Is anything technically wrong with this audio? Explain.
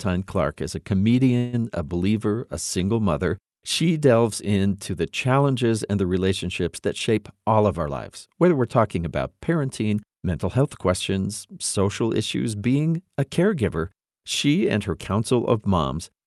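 Yes, there are two faults.

At 1.37 to 1.68 s, between "is a" and "a believer a single", the sound stalls into a fading buzz or hiss for about 156 ms, then resumes. This is likely a call audio freeze: late packets emptied the jitter buffer.

From 7.10 to 9.05 s, after "and the relationships that", a jitter buffer speed-up plays the audio at 108% speed. Roughly 150 ms of pitch periods were cut, so it sounds hurried but keeps its pitch.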